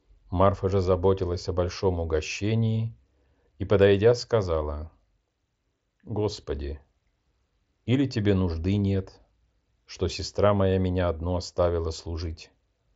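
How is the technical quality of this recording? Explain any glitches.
No glitches or faults turn up in this speech recording.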